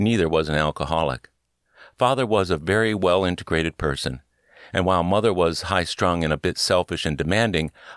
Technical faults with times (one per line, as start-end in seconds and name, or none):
none